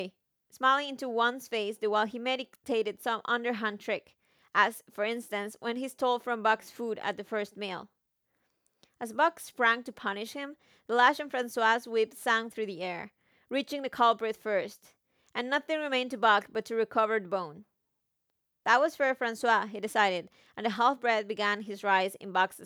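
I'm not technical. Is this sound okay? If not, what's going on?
Yes, this recording sounds fine, with nothing wrong.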